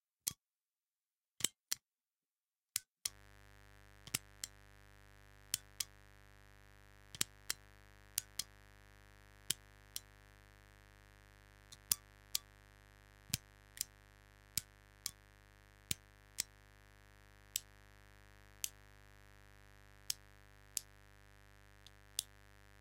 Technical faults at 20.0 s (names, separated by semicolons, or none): mains buzz